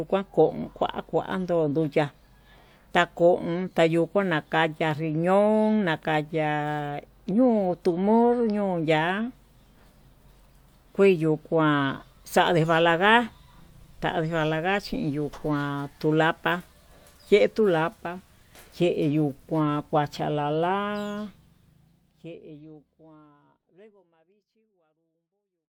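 Nothing stood out on listening to this speech, and the gentle fade-out over the last few seconds sounds like ordinary editing.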